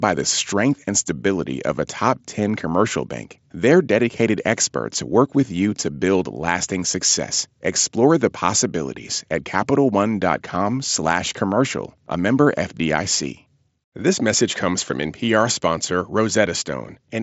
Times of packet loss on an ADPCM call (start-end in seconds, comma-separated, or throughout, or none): none